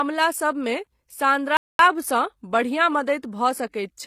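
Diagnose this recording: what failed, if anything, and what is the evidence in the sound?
Codec stage. Sibilance sounds gritty and lispy. Likely HE-AAC compression near 24 kbps, rebuilding treble from copied lower bands.

Playback stage. The sound drops to silence from 1.57 to 1.79 s, then resumes. A likely playback stall, with the player starved of data or blocked.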